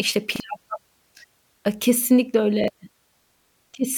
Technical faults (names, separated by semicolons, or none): repeated buffer